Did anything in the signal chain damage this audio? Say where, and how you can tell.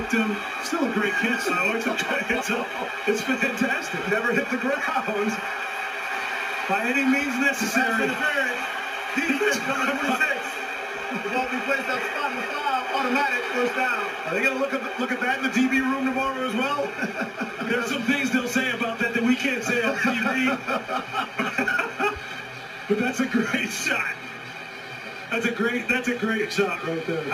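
Yes. A gritty, inharmonic fizz rides on top of the audio for the whole clip, rising with louder and brighter passages and sitting at roughly 25 dB below the signal itself. That points to crude rate conversion at the sample-rate stage, most likely 44.1 kHz to 48 kHz done by nearest-sample repetition with no filtering. The periodic duplicated samples create a repeating error pattern whose tones are shifted, inharmonic copies of the material.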